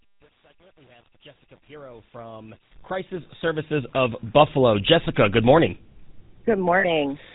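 A buzzy, gravelly roughness colours the speech from start to finish, and nothing above 4 kHz comes through. This is the GSM full-rate codec, with plainly audible damage, consistent with 13 kbps GSM full rate. It models the vocal tract and excites it with a sparse train of regularly spaced pulses, keeping only a third of the excitation samples, which produces the coarse, rasping texture.

From 6.8 to 6.85 s the sound briefly freezes into a rough, metallic ring. These are lost GSM frames. About 40 ms of data went missing, which fits two lost frames. The decoder filled the gap by repeating the last good frame's settings. The loss is short, so the ring stays brief and doesn't decay all the way to silence.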